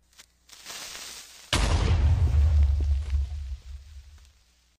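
No technical faults can be heard.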